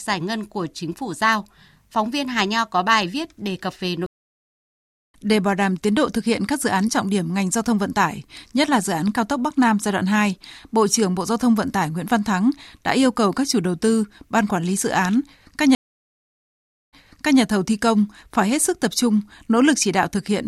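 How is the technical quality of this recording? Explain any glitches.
The recording has two stream reconnects, where playback drops out and resumes from a different point in the audio.

Stream reconnect, 4.06 to 5.14 s, after "viết đề cập về": the connection broke, leaving about 1.05 s of silence, and a fresh decoder resumes roughly a second further on, skipping audio. Stream reconnect, 15.75 to 17.41 s, between "lý dự án các" and "thầu thi công phải": about 1.16 s of silence, then playback restarts 0.5 s earlier, repeating material.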